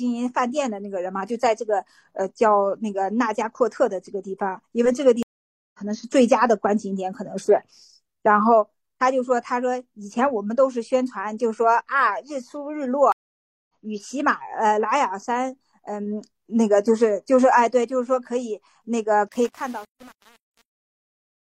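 Speech, interrupted twice by a stream reconnect. At 5.23 s the audio drops out for 0.51 s and resumes at 5.79 s about half a second further on. At 13.12 s there is a 0.57 s silence, and the audio returns at 13.69 s roughly a third of a second later. Both times the connection broke and the player restarted its decoder mid-stream, so the skipped material is simply gone. The smooth fade-out that begins around 19.3 s shows truncation distortion from 19.28 s to the end at 21.58 s. The fade stage is dropping low-order bits without dither, with resolution that fits only about 7 bits. As the level sinks, the waveform collapses into coarse steps, and the tail turns gritty.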